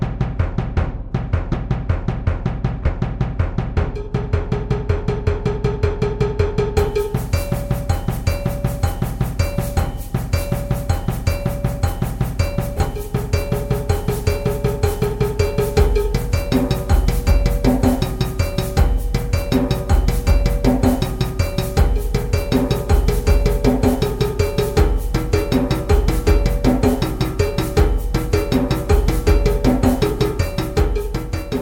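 Three spots of frames out of order: 1.52 to 1.55 s, 2.83 to 2.88 s and 12.77 to 12.83 s. Each swaps two neighbouring blocks (roughly 10, 20 and 30 ms), so the audio briefly flutters, though no time goes missing.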